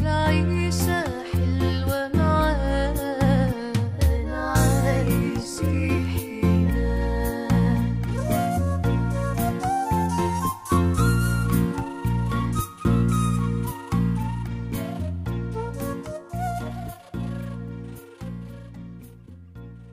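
Nothing stood out as a technical problem on listening.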